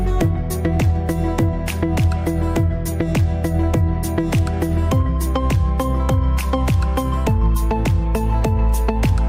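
Brief crackle rides on the loudest peaks throughout, from start to finish. This is hard clipping: the signal was driven about 3 dB past what the chain could pass, so roughly one percent of samples had their tops sheared flat, adding harsh high harmonics.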